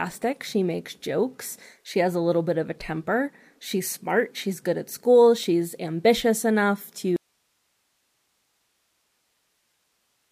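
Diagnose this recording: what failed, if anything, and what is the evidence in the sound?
The speech drops out abruptly at 7.16 s and never returns. From there to the end, only hiss remains, roughly 50 dB below the speech level. This is an audio dropout to a faint residue. The cut is instant, not a pause or a fade. The hiss shows the path after the break stayed live. The likely cause is a lost connection in the analogue wiring, ahead of a preamp and converter that kept running.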